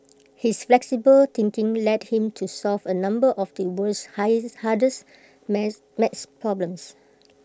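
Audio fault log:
No faults are heard anywhere in this speech clip. Nothing in it calls for an entry in this log.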